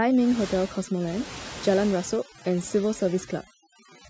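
Throughout the speech, the background drops to near silence flecked with twinkling specks. This is overdone noise removal: an aggressive noise reduction setting pushed individual frequency bands down whenever they neared its noise estimate, stripping quieter parts of the voice too.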